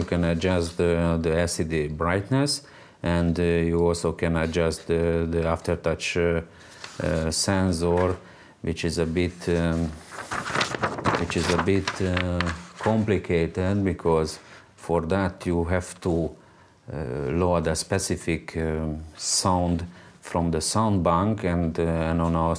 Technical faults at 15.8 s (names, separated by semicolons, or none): none